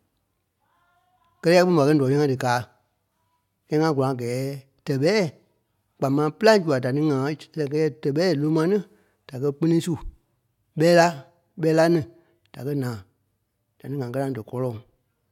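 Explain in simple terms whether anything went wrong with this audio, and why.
Nothing went wrong here.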